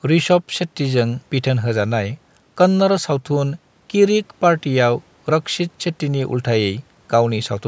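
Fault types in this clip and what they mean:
No fault types are present in this clip, so there is nothing to explain.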